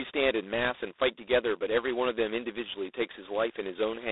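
G.726 ADPCM coding runs throughout this speech clip, with a harsh, rasping hiss that follows the speech level, which fits the 16 kbit/s mode, while nothing above 3.8 kHz passes.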